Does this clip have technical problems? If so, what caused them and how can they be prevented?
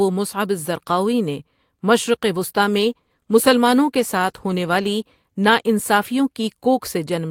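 Yes. A call bitrate drop runs from 2.34 to 6.25 s, after "مصعب الزرقاوی نے مشرق". The speech turns coarse and muffled, which fits the encoder being squeezed from about 48 to 18 kbps. Keeping more bandwidth headroom on the link, or setting a higher minimum encoder bitrate, would prevent it.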